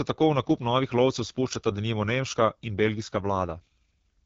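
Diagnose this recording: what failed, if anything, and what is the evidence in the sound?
The failure sits at the codec stage: AMR wideband (HD Voice) coding runs through the whole speech clip, and the rough, raspy texture fits its low 8.85 kbit/s mode. A spectrogram shows a hard ceiling near 7.6 kHz, with noise-like, structureless energy above 6.4 kHz replacing detailed harmonics.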